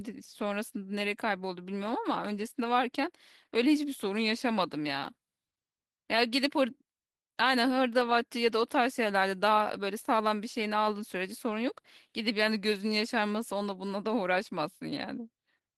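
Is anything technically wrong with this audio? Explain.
Yes, there's Opus voice compression throughout: starved SILK-plus-CELT coding, which sounds like roughly 16 kbps, makes the speech audibly hoarse and slightly robotic.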